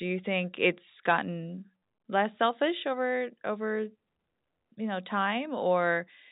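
No technical faults can be heard in the speech, which comes over the G.711 A-law telephone path at 64 kbps, so nothing reaches above about 3.8 kHz and any coding damage is faint at most.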